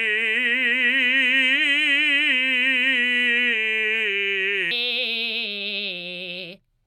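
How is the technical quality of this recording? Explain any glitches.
The music has one clear glitch, near the end. From 4.71 s to 6.87 s it plays at the wrong sample rate. The samples run 1.38 times too fast without conversion, which fits 32 kHz material played at 44.1 kHz. Tempo rises, and pitch jumps about 5.5 semitones higher.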